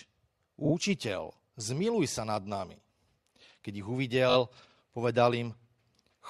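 Three spots of repeated frames stutter the speech. At 0.64 s a roughly 40 ms chunk plays two extra times, stretching things by 80 ms. At 2.55 s a 20 ms slice repeats once, and at 4.29 s a 20 ms slice goes round three more times, adding 60 ms. In each case the same compressed audio was sent or written again, so the decoder replays it, which fits a repeat of two to four short codec frames.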